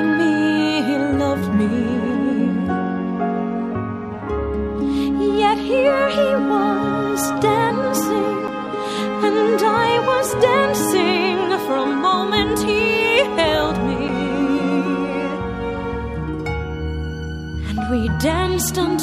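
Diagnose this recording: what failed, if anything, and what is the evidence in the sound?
A tick with a near-instant dropout, a few milliseconds of silence, at 8.47 s and again at 14.08 s, after which the sound resumes from a different point. These are CD skips at the playback stage: the laser jumped to another turn of the disc's spiral.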